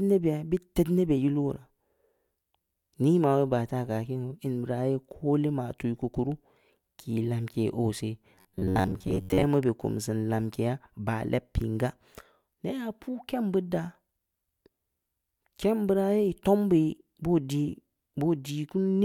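From 8.35 to 9.46 s the speech collapses into a rigid, metallic buzz near 94 Hz that still tracks the rough shape of the words. This is robotic sound from repeated short buffers, likely caused by audio arriving too seldom, so a fragment of about 11 ms is replayed in place of most of the real signal, roughly seven tenths of it. Unlike plain dropouts or stutter, there is no silence: the gaps are filled by the repeated fragment.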